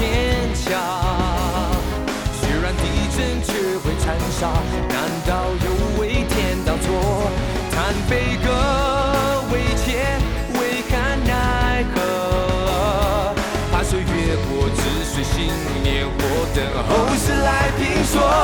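No technical faults are audible anywhere in the recording.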